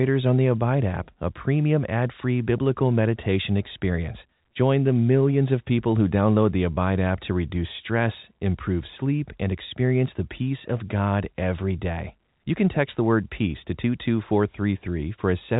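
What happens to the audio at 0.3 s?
Nothing goes wrong at 0.3 s: the speech passes through intact, carrying only the normal band limit of G.711 telephone coding, with nothing above about 3.8 kHz.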